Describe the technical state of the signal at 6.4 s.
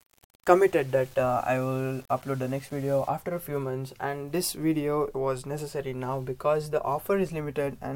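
At 6.4 s the signal is intact, with no dropout, distortion, click or other fault.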